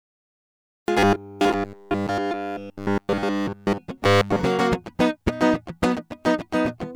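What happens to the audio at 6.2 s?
At 6.2 s the music plays through intact, with no dropout, click or distortion.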